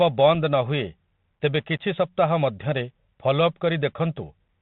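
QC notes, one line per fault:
throughout: Bluetooth CVSD headset codec. The speech is band-limited with nothing above 4 kHz, and the sibilants come through scratchy rather than simply dulled. Loud, bright moments break up where the one-bit delta modulator's adaptive step cannot keep pace with the waveform. A granular hiss sits under the voice, which fits a 64 kbps CVSD stream. A plain telephone-band filter would sound muffled but clean. The step-tracking grit and underlying hiss point to CVSD specifically.
0.35 s: unconcealed Bluetooth headset packet loss. A hole of about 3.8 ms, consistent with a single lost packet, cuts into the speech with abrupt edges. Nothing was done to patch the gap, so silence or an idle pattern filled it. This differs from a codec glitch or a buffer underrun. It is one very short, sharp dropout on top of the CVSD sound rather than a longer stall or a smeared, concealed patch.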